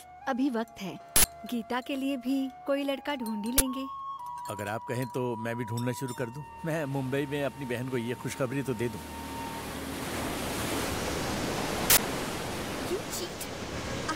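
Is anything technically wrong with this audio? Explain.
Yes. There are three uninitialised buffer faults, at 1.16 to 1.24 s, 3.58 to 3.60 s, and 11.90 to 11.98 s. The first and last are short, loud bursts of digital noise, and the middle one is a loud crack. The first and last last 80 ms, the middle one 20 ms. A block was sent to the output before any audio had been written into it. Whatever was left in that memory was played as samples.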